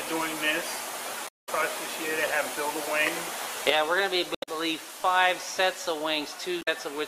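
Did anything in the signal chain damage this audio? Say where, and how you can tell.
Yes: damaged data in a compressed stream, at the codec stage, at 1.24–1.49 s, 4.32–4.49 s and 6.59–6.68 s. Each is a brief garbled blip where corrupted bytes made the decoder misread frames, lose sync and search for the next valid frame header before clean audio resumes.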